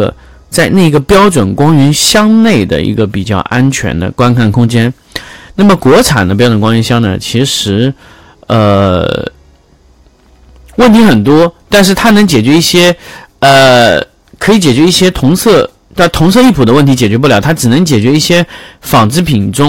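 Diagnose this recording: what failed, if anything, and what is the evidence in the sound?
Hard clipping runs throughout the speech, from start to finish. The level is pushed about 17 dB past what the converter or sample-format stage can pass, so roughly a tenth of samples are cut flat, and those squared-off peaks add high harmonics, giving harsh fuzz on every loud syllable.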